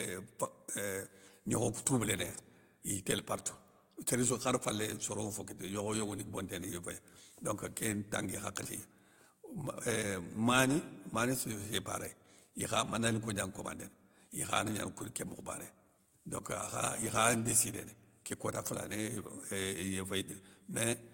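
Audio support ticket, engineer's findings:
Engineer's findings: no audio fault found in the speech recording.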